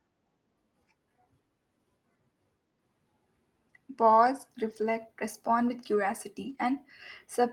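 Packets were lost at 4.69 to 4.83 s and again at 6.45 to 6.63 s. Each was a lost packet rebuilt from error correction, the low-bitrate copy carried in the next Opus packet, so there's no gap. About 80 ms and then 100 ms of speech sound rougher and noisier.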